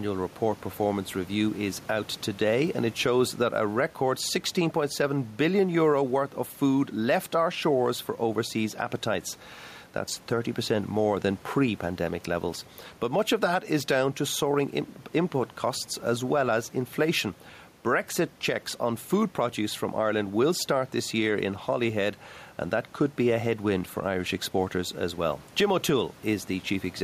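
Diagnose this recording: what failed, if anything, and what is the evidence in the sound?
Gain pumping runs through the whole recording. The room noise sits about 31 dB below the speech. The gain swings around 5 dB. Loud and quiet passages are squeezed close together. The likely cause is input gain set far too high for the microphone, with a fast limiter or compressor in the call processing clamping each peak and releasing in the gaps.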